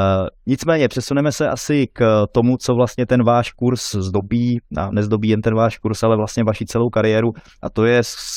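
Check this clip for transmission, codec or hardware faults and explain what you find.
I found no faults in this clip.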